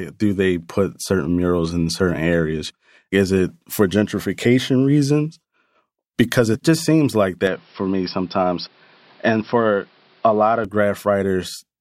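A speech recording where, from 7.47 to 10.65 s, the sound goes dull and boxy with nothing above 5.5 kHz and a faint new noise floor well below the voice. There's no gap and no level jump, so it's likely the input switched to a poorer device before switching back.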